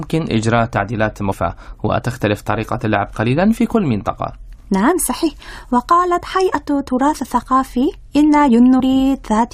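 At 1.31 to 1.33 s, and again at 8.79 s, the speech breaks briefly where damaged data in the compressed stream reaches the decoder. The corrupted bytes can't be read as valid frames, so the decoder loses sync and emits garbled output until it finds the next frame header.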